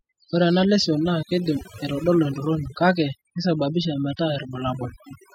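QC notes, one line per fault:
Throughout: overdone noise removal. The noise reduction on this speech was pushed far too hard, so any frequency band sitting close to the tool's noise estimate gets pulled right down or cut out. The background collapses to near silence dotted with twinkling, chirpy specks where isolated bands flicker on and off, and the quieter parts of the voice are stripped away with the noise.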